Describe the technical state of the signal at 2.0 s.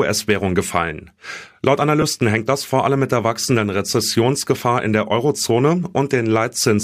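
At 2.01 s a single Bluetooth LE Audio frame of about 7.5 ms was lost, and the LC3 decoder filled it with the previous spectrum under random signs, leaving a brief noisy smear in the speech.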